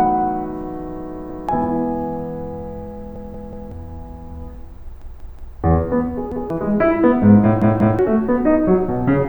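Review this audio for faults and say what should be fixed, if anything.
The music stutters from a repeated buffer at 1.3, 3.16, 5.02, 6.32 and 7.62 s. A piece about 186 ms long plays again with a hard join, which fits an 8192-sample buffer. It repeats once, three times, three times, once and twice. Each time, new audio arrived late, so the device replayed the last buffer. To prevent it, give the playback path more headroom so each buffer is filled before the device needs it.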